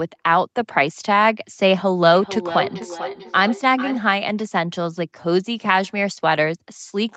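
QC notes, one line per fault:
2.15–4.04 s, feedback echo between two devices: the speech comes back at a steady interval of roughly 400 ms, each return thinner and more ringing than the last, with the loudest repeat at about -10 dB relative to the speech. Two devices on the same call share the room, so one plays what the other's microphone sent, and that microphone captures it again. Each echo canceller removes only its own playback, so this loop survives.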